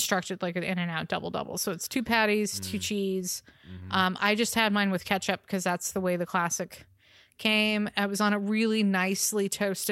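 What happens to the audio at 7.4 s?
Nothing goes wrong at 7.4 s; the speech carries on cleanly through that moment with no dropout, click or other fault.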